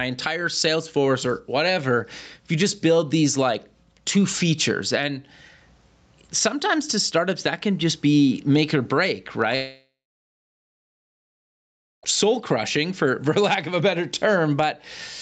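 Gain pumping runs throughout: a fast limiter likely drags gain down on each loud sound, so the gain swings by about 15 dB, sounding squashed. A long network dropout follows from 9.55 to 12.05 s, after "be make or break": about 2.5 s is lost, likely to missing packets, with a fading fill giving way to near-silence before "soul crushing for" resumes.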